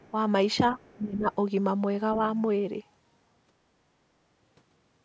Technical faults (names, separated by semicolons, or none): other side's voice leaking through; speech suppressed in double talk